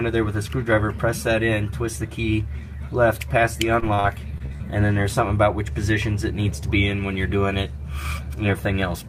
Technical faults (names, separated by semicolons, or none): repeated packet loss (robotic sound)